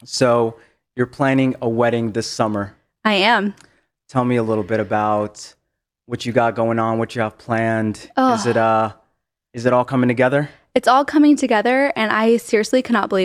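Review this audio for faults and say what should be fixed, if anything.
No faults turn up anywhere in this speech recording. Nothing here needs to be fixed.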